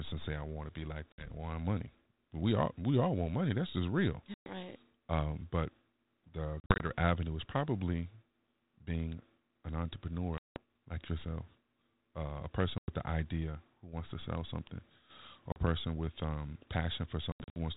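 Packet loss on an ADPCM call punches hard-edged silent holes at 1.12, 4.34, 6.6, 10.38, 12.78, 15.52 and 17.32 s. Gaps total 40 to 180 ms. At 6.6 and 17.32 s they come in scattered bursts. The decoder's predictor and step size drift from the sender's. Speech returns slightly distorted, then settles.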